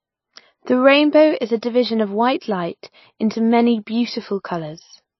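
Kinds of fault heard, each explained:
MP3 compression: the speech sounds watery and swirly throughout, with nothing above 5.8 kHz, likely from a low-bitrate MP3 encode near 24 kbps. A spectrogram shows a hard ceiling at 5.8 kHz and weak high components blinking on and off between frames in patchy, holey texture.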